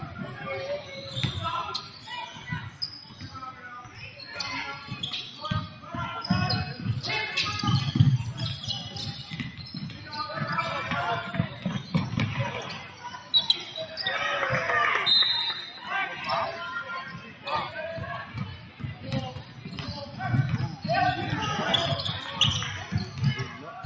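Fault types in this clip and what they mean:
Noise suppressor applied to music or sounds, throughout the clip: a suppressor built for speech stayed active and treats steady tones, ambience and tails as noise. Its gain swings by around 10 dB, so attacks pass while sustained sound sinks and pumps.
Sound cut by the noise suppressor, at 0.03–0.9, 1.83–4.21, 5.68–5.87, 9.51–10.11, 11.49–13.33, 17.13–20.19 and 23.07–23.67 s: held or fading sound drops by about 5 to 7 dB and its decays are cut short. The deepest dips come at 1.83–4.21 and 17.13–20.19 s.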